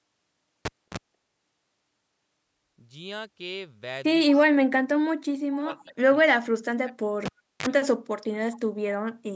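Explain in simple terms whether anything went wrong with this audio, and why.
A live cable was pulled and plugged back in twice, at 0.65 to 0.98 s and 7.26 to 7.66 s: a pop, silence, a brief mains buzz, then another pop.

Speech suppressed in double talk is the likely cause of the dips at 4.43 to 5.14 s, 5.48 to 6.15 s and 6.32 to 7.04 s. The canceller turned the talker down while both sides spoke.

An echo leak likely let faint copies of the voice return about 0.23 s late, at 5.51 to 5.57 s, 6.27 to 6.35 s and 8.53 to 8.59 s.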